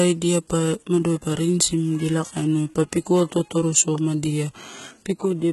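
HE-AAC compression, throughout the speech, is the likely cause of the gritty, lispy s sounds and heavily smeared treble. Content stops at 11.8 kHz, and the upper band seems rebuilt from copied lower harmonics rather than coded directly, which fits a very low bitrate around 16 kbps.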